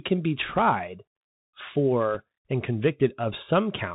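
Throughout, the speech runs through a Bluetooth CVSD headset codec. Its one-bit, slope-tracking coding, which fits a 64 kbps link, cuts everything above 4 kHz, so the sound is plainly narrowband, s sounds turn scratchy, loud high-frequency sounds distort, and a granular hiss lies underneath. From 0.49 to 0.60 s, just after "can be", bit errors on the Bluetooth voice link flip a small share of bits, roughly one or two percent. Because each bit carries little weight, this comes through as a rushing crackle rather than loud clicks. A second, briefer burst at 2.15 s, at around one percent, adds a short crackly flicker.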